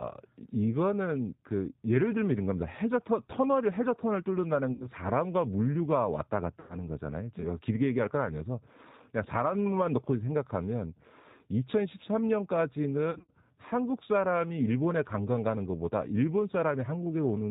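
Speech that sounds slightly rough and synthetic throughout, with a band-limited edge and nothing above 4 kHz. That is the G.729 codec, here the G.729A variant at 8 kbit/s, and its damage is plainly audible. It rebuilds each 10 ms frame from a vocal tract filter, a pitch estimate and a handful of pulses rather than the actual waveform, which gives the voice its coarse, artificial texture. At 4.73 to 4.88 s, 6.60 to 6.77 s and 13.11 to 13.31 s the voice smears into a buzzy tone or coloured noise that fades, and stays weak for a moment after. These are VoIP packet losses concealed by the speech codec. The decoder keeps extrapolating its last pitch and filter while turning the gain down. The gaps fit roughly seven, nine and fourteen lost 10 ms frames. The last one is spread over about 180 ms with a longest unbroken run of 70 ms.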